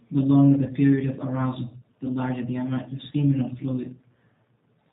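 From start to finish the speech passes through the G.729 codec. The damage is plainly audible. Nothing above 4 kHz survives, so the sound is dull and boxed in. Each 10 ms frame is rebuilt from a vocal tract filter, a pitch predictor and a few pulses. That coarse rebuild gives a rough, synthetic edge. The texture fits an 8 kbit/s stream, likely G.729A.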